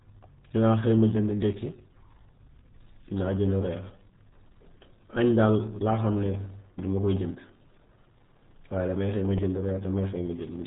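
Throughout, the speech passes through the RealAudio 14.4 codec, squeezed hard enough to suggest about 8 kbit/s: nothing above 3.8 kHz survives, leaving it muffled and gargly.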